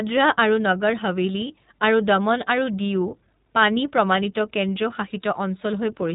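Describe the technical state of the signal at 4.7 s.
At 4.7 s the speech sounds band-limited and slightly rough, with a synthetic edge, and nothing above 4 kHz comes through. This is iLBC codec damage, plainly audible here and present across the whole clip rather than just at this moment. iLBC is a narrowband codec that codes each frame's excitation on its own, without relying on the previous frame. It runs with 20 ms frames at around 15.2 kbps.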